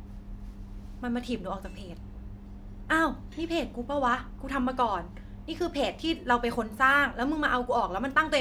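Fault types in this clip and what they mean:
Nothing stood out on listening to this speech recording.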